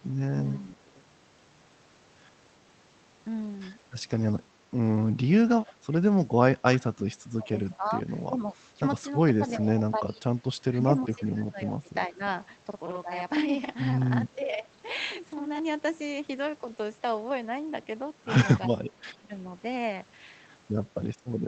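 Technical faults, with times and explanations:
6.9 to 12.2 s, 14.35 to 14.69 s and 18.68 to 19.33 s, speech suppressed in double talk: The speech level dips and breaks into pieces, by roughly 20 dB in the first stretch, which loses around 3 seconds in total, about 10 dB in the second and about 15 dB in the third. This is likely an echo canceller that could not tell the near talker from loudspeaker echo while both sides spoke, so it attenuated everything, including the wanted speech.
12.71 to 15.59 s, channel delay (doubling): One channel arrives about 46 ms late, which fits a 2048-sample buffer. Once the channels are folded to mono, the late copy sits at the same level as the original and is heard as a short slap echo or thickened doubling. It is not a room reflection. The suppression dip at 14.35 s falls inside this stretch, so the doubled sound also dips by about 10 dB there.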